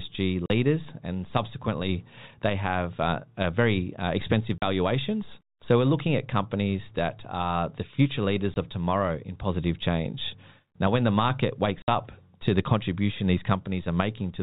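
Speech with four abrupt dropouts at 0.46–0.50 s, 4.58–4.62 s (after "uh very uh expensive"), 8.54–8.56 s (between "that are the future" and "of tomorrow in positive") and 11.82–11.88 s (between "when the market" and "to the contribution these"). These are packet loss filled with silence: gaps of 40, 40, 20 and 60 ms, consistent with whole 20 ms packets going missing and being replaced by silence, all heard through the narrow telephone band of G.711 coding.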